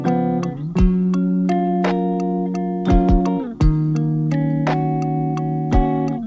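Nothing stood out on listening; the only notable trait is that the sound stops at 8 kHz, which fits a wideband call codec such as G.722 running at 64 kbps.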